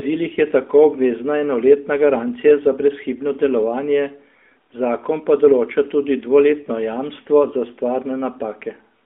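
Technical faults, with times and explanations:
No faults found: the speech is confined to a phone band of about 250 Hz to 3.5 kHz and carries the light coloration of the AMR narrowband mobile codec, consistent with its top 12.2 kbps mode.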